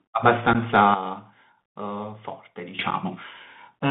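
Speech heard through a narrow, hissy telephone-like band, roughly 150 Hz to 3.6 kHz, with scratchy s sounds, a grainy noise bed and harsh distortion on loud bright moments. This is the Bluetooth CVSD headset codec, whose one-bit delta coding fits a 64 kbit/s link and cannot slew fast enough for sharp high-frequency energy. At 0.53 to 0.56 s, and again at 2.91 s, the sound drops out abruptly for about 15 ms and then about 7.5 ms, each hole followed by a briefly softer return. These gaps are unconcealed Bluetooth headset packet loss, with the lengths pointing to a couple of packets and then a single packet, each replaced by silence or an idle pattern rather than patched over. From 0.94 s to 2.79 s the whole level, background hiss included, steps down by about 12 dB with no fade and then steps straight back up. This is a sudden gain jump, most likely a digital gain setting switched instantly rather than ramped.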